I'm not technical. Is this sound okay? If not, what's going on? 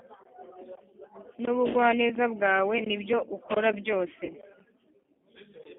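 No, not quite. The whole clip went through the G.729 codec, a squeezed phone-call format, so the speech sounds thin, muffled and a bit rough or robotic. You'll also hear two brief glitches from VoIP packet loss concealed by the speech codec: around 0.78 to 0.83 s and again around 4.25 to 4.35 s, a little bit of audio went missing and the phone software papered over it, leaving a short buzzy or hissy smear that fades.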